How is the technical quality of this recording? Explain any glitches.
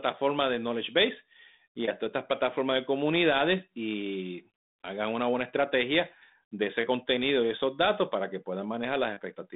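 Nothing in this speech recording stood out as a glitch on listening, and its narrow telephone-line bandwidth, with nothing heard above about 3.8 kHz, is what you would expect from a 32 kbit/s G.726 ADPCM connection.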